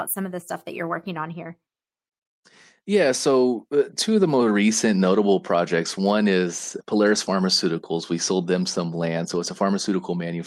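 Listening through the speech recording, nothing stood out as a technical fault at any point.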